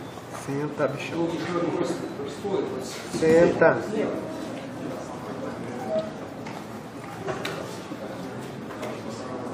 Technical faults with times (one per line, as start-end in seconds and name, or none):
none